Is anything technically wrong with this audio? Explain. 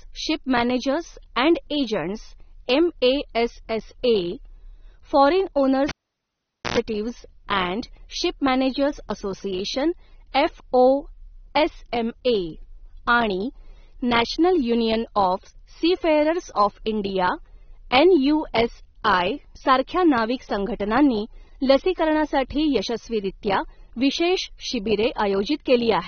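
Yes, there are three problems.

Throughout the speech, the codec has likely discarded detail to save bits: nothing is present above 6.3 kHz, which fits AAC compression at a low bitrate around 24 kbps. The damage is plainly audible, with a dull, smeared quality and a warbling, fizzy texture on sustained sounds and sibilants.

From 5.89 to 6.78 s, a cable was pulled and plugged in. The signal path breaks for about 0.84 s. A pop marks the disconnect, then near silence, then about 0.1 s of 60 Hz mains buzz while only the plug tip makes contact, and a second pop when the sound returns.

At 10.32 to 10.35 s, just after "अँड शिप मॅनेजर्स असोसिएशन", there is pre-echo. A sharp attack sits late in a transform block, and the quantisation noise sized for the loud part spreads back about 28 ms into the quiet before it. This is heard as a brief hiss ahead of a softened onset.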